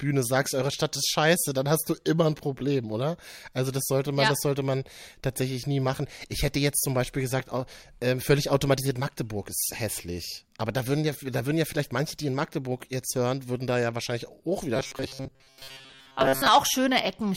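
Robotic sound from repeated short buffers affects this speech clip from 14.76 to 16.48 s, turning the voice into a rigid, metallic 134 Hz buzz. Audio likely arrived too seldom, so a segment of about 7.5 ms was replayed for most of that stretch.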